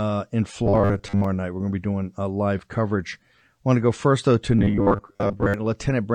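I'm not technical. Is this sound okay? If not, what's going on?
No. Robotic sound from repeated short buffers appears at 0.66 to 1.24 s and again at 4.59 to 5.54 s, right after "go first though to." The speech turns into a rigid 100 Hz buzz, likely because new audio arrived too slowly and the software kept replaying tiny 10 ms chunks in place of the missing sound. Roughly half of the first stretch and most of the second is repeated material.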